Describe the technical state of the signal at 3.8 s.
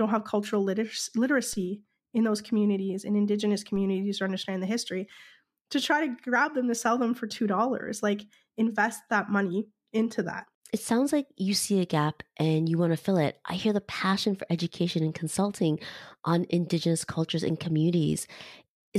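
A DC step occurs at 3.76 s: the waveform's zero line jumps by about -36 dBFS, then drains away through a 5 Hz high-pass. The sudden shift is heard as a low thump or click, while the speech carries on unchanged.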